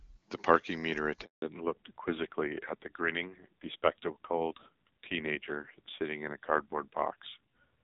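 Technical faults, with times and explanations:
1.24 to 1.42 s, handover gap: the sound cuts out within a few tens of milliseconds and stays silent for about 180 ms while the call switches networks. No speech frames reach the receiver during the switch, so whatever was said there is lost.
1.42 s to the end, fallback to narrowband: the clear HD Voice sound (consistent with AMR-WB near 23.85 kbit/s) gives way to a band-limited one with nothing above 4 kHz. The result is duller and rougher, which fits narrowband AMR at around 5.9 kbit/s.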